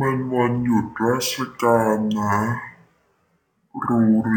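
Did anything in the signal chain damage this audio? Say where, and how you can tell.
Yes. Throughout, the speech plays at half speed and a full octave low, the signature of stereo read as mono at the file-reading or format-conversion stage: alternating left and right samples are treated as one channel. Unlike a simple sample-rate mismatch, it adds a faint mirrored image in the upper spectrum.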